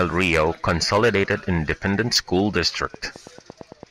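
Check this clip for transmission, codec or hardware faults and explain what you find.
There's one fault here: a train of clicks starting at 2.83 s and running right to the end at 3.91 s. You get about nine clicks a second, evenly spaced, roughly ten in all, and each one peaks at about the same level as the speech. The steady, identical pulses point to a likely source in nearby interfering equipment or a faulty connection or power supply. It comes across as a regular ticking laid over the speech.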